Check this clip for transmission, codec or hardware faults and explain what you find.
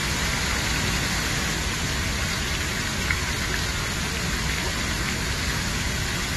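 Two faults are audible: codec damage across the whole clip and a doubled copy of the sound in the first second and a half.

Throughout, the sound is dull and smeared, with a fizzy, warbling texture, and nothing is present above 12.1 kHz. This is likely AAC compression at a low bitrate, consistent with roughly 32 kbps AAC-LC. The encoder has lowered its cut-off and coarsely quantised what remains.

From the start to 1.54 s, a second full-band copy trails roughly a fifth of a second behind, somewhat quieter, with no decay or room colour. It is already running when the clip begins and stops abruptly at 1.54 s. This is likely a doubled audio track, with the same signal mixed in twice and out of step.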